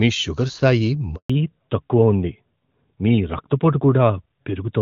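A speech recording carried over an HD Voice call path. At 1.16 s, right after "మీ షుగర్ స్థాయి", a handover gap silences the audio for 140 ms, until 1.30 s. The call switched networks and no speech frames arrived during the switch, so the sound dies away quickly and whatever was spoken in that interval is lost. From 1.30 s to the end, a fallback to narrowband removes all content above 4 kHz, and the sound becomes duller and rougher. The change from clean wideband coding, consistent with AMR-WB at 23.85 kbit/s, points to the new link carrying AMR-NB at 12.2 kbit/s.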